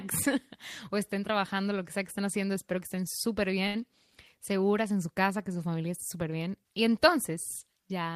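A faint hiss and roughness rides on the speech from start to finish, swelling on loud and bright sounds and disappearing in pauses. This is sample clock jitter: the converter's clock wanders by around a microsecond, so samples land slightly off time, leaving an error roughly 35 dB below the speech.

From 3.67 to 3.76 s, just after "que estén súper", a sound hangs on too long with a slight buzzy quality. This is a short stall from a late packet: the jitter buffer ran dry, and the receiver stretched the last sound for 69 ms until data arrived. Nothing was lost, but everything afterwards runs 69 ms later.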